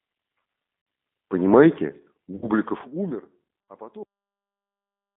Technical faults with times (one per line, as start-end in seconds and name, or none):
0.00-5.16 G.729 codec
0.79-0.87 VoIP packet loss concealed by the speech codec
2.36-2.49 VoIP packet loss concealed by the speech codec